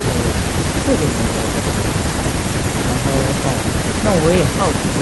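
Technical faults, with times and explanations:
Nothing stood out on listening to this speech recording.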